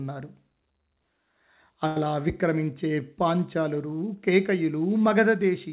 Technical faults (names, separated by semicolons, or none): short stall from a late packet; short concealed packet loss